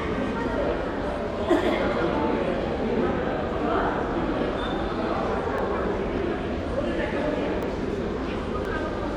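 From 5.58 to 8.65 s, about four ticks land every 1.02 s: periodic USB or driver dropouts, each skipping roughly a millisecond of audio.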